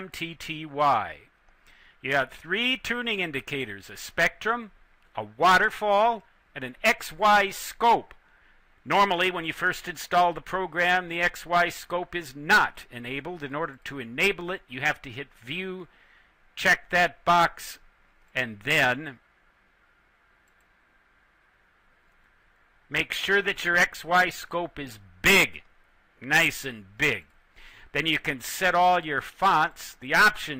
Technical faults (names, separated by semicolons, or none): adaptive stream at a lower bitrate